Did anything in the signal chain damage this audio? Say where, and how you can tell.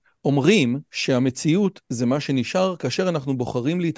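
No, nothing along the signal chain has audibly damaged this speech recording, and the signal holds steady throughout without any breaks, distortion or level disturbances.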